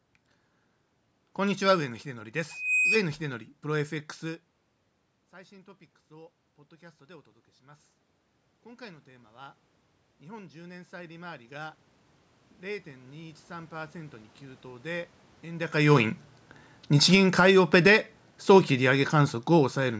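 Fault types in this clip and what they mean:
Loudspeaker feedback squeal: A pure 2.5 kHz tone swells out of the speech from 2.49 to 2.99 s, building over roughly a third of a second to a few dB above the voice. The microphone picked up its own loudspeaker, and that frequency looped past unity gain.
Automatic gain rising: From 5.31 to 16.05 s, voice and room noise swell together as the gain climbs 17 dB after the input dropped by about 23 dB. A smaller 5 dB rise follows between 17.34 and 18.27 s, lifting the background along with the speech.
Automatic gain falling: From 16.96 to 19.95 s the sound sinks, voice and background together, as the automatic gain control judges the input too loud or its background noise too strong and pulls its gain down by about 6 dB.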